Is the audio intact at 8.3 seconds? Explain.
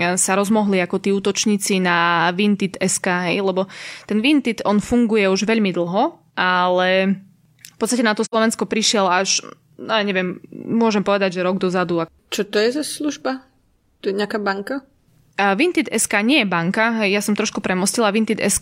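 No. Just after "na to", from 8.24 to 8.35 s, the speech falls into a hole from AAC frame loss with muting. About 85 ms of audio is missing, which fits two lost frames. The decoder filled them with a zeroed spectrum, so the sound goes silent. The overlapping transform windows fade the level down into the gap and back up out of it. That soft-edged fade sets it apart from a hard sample dropout, which cuts off abruptly.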